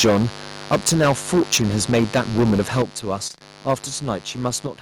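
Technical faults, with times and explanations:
throughout, mains buzz: a steady raspy buzz sits about 20 dB below the speech, built from 50 Hz harmonics that switching spikes push up into the kilohertz range.
0.00–0.26 s, 0.72–2.82 s and 3.69–3.74 s, microphone overload: loud syllables turn harsh and crackly, peaks about 10, 13 and 4 dB over the limit, likely from input volume set too high.
0.05 s, 2.82 s and 4.67 s, microphone volume stepped down: speech and background suddenly drop by about 2, 9 and 6 dB, likely the call software cutting input gain after clipping.
3.27–3.42 s, repeated packet loss (robotic sound): choppy speech with bits missing, as holes up to 22 ms long keep being patched by stretching the previous sound.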